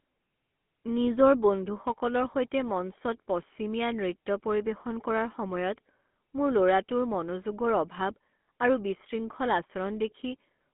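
Speech heard throughout through the GSM full-rate codec. The sound sits in a telephone band of roughly 200 Hz to 3.4 kHz, with nothing above 3.8 kHz, and carries a plainly audible buzzy, gravelly roughness, which fits the 13 kbps full-rate coder. That grit comes from rebuilding the voice from a coarse, regularly spaced pulse excitation, which sets it apart from clean band-limiting, where the voice only sounds muffled and thin.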